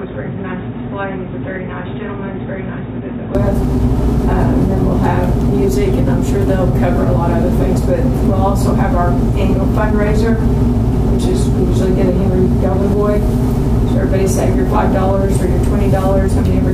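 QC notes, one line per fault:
0.00–3.35 s, input switched to a poorer device. The opening sound is dull and boxy, with nothing above 3.8 kHz. It is also quieter, by roughly 10 dB, and carries a new background noise sitting well below the signal, about 40 dB down. At 3.35 s the full band and level return at once, with no gap. This is likely a mid-recording change of input to a narrower-band microphone or headset call profile, then back.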